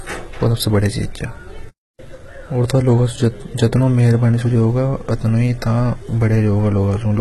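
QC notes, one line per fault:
Throughout: HE-AAC compression. The speech has a bright but artificial top end, with s sounds turning gritty and lispy and a metallic sheen on the treble, all cut off sharply at 11.8 kHz. This is likely HE-AAC at a very low rate, heavily damaged in a way that fits roughly 16 kbps. Only the lower band is truly coded; the treble is copied up from below and roughly shaped, so its harmonics fail to line up with the real ones.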